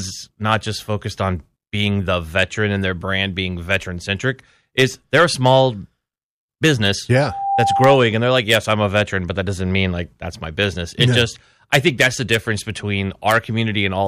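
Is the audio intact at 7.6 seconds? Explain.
No. At 7.6 seconds a steady tone near 791 Hz has already swelled out of the speech into a loudspeaker feedback squeal. It rises over a fraction of a second, sits a few decibels above the speech, and runs from 7.14 to 8.01 s. A microphone is picking up the loudspeaker it drives, and at this one frequency the round-trip gain exceeds unity, so the tone feeds on itself until the amplifier limits it or the loop is broken.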